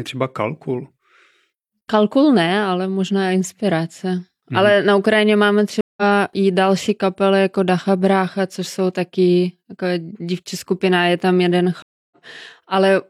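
At 5.81 s, just before "i další kapely jako", and at 11.82 s, after "skupina je tam jeden", a stream reconnect cuts the speech: silences of 164 ms and 289 ms, then a fresh decoder resumes mid-stream, skipping ahead roughly 150 ms and 200 ms respectively.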